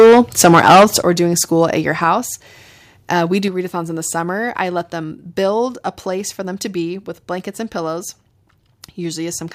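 From the start to 0.96 s the speech carries a harsh, crackling edge on every loud syllable, likely microphone overload, driving peaks about 12 dB past the converter's ceiling and flattening a large share of waveform tops. Then the level drops abruptly in clean steps with no added distortion, which points to microphone volume stepped down, likely by call software reacting to the overload: about 8 dB at 1.02 s just before "doing school at your", about 4 dB at 2.04 s right after it, and about 4 dB more at 3.48 s ahead of "readathons in the summer". Voice and background fall together at each step.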